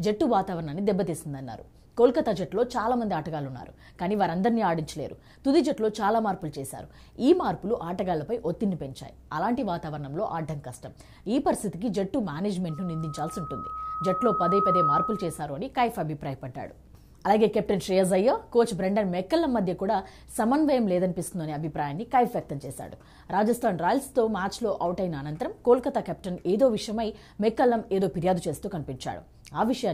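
At 12.69 s a loudspeaker feedback squeal begins. A microphone is hearing the loudspeaker it feeds. At 1.3 kHz the loop gain tops one, so that tone feeds itself. It swells over roughly two seconds into a steady, piercing whistle. At its peak it sits about 5 dB above the rest of the sound. The squeal stops at 15.45 s.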